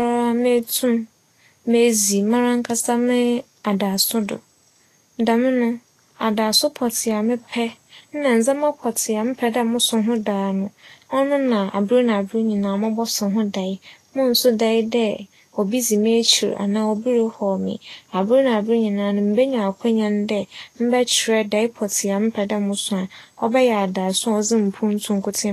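Across the whole recording the speech sounds hissy and grainy, with a rough, papery edge on the treble, and nothing is heard above 14.2 kHz. The likely cause is Vorbis compression at a low setting, which fits a bitrate of around 32 kbps. The codec keeps a smooth outline of the spectrum but quantises the high-frequency detail so coarsely that it comes back as noise of similar energy, roughening tones and softening consonant attacks.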